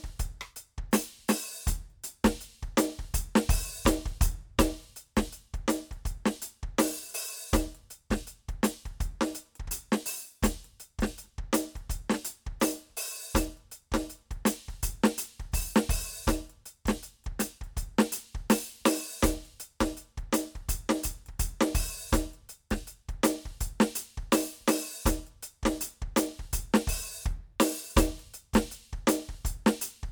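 Nothing stood out on listening to this music.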